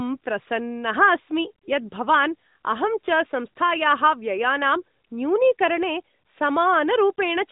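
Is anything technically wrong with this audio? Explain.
No, nothing here sounds technically wrong, so there's nothing that needs fixing.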